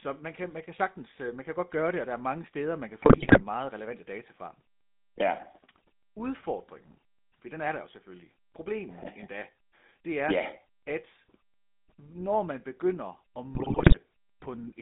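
Throughout, the speech carries GSM full-rate codec damage: a buzzy, gravelly roughness from pulse-driven vocal-tract coding, consistent with roughly 13 kbps. The band runs from about 150 Hz to 3.7 kHz. A spectrogram shows nothing above 3.7 kHz and grainy, smeared harmonics.

GSM bit errors strike from 3.02 to 3.43 s, between "mange steder man kan" and "relevante data fra", and again from 13.54 to 13.99 s. Corrupted filter, pitch and gain values make the sound squawk, pop and gargle. The waveform shows erratic level spikes, and the spectrogram shows distorted, blotchy frames.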